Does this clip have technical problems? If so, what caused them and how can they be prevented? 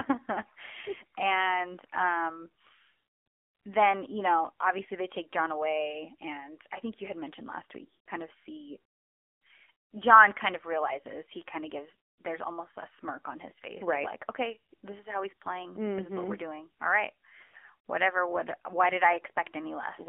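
Yes. The whole clip carries AMR narrowband mobile codec damage. The speech is confined to roughly 250 Hz to 3.5 kHz and sounds plainly buzzy and synthetic, which fits a low AMR-NB mode near 7.4 kbps. Prevent it by using a wideband or higher-rate codec end to end.

There are also lost AMR speech frames at 7.96 to 8.09 s, about 100 ms missing, and at 17.44 to 17.69 s, where 160 ms of gaps are scattered over 240 ms. The decoder repeats the last good settings with falling gain, so the speech smears and dips before recovering roughly. Prevent it with a stronger radio link or better error protection.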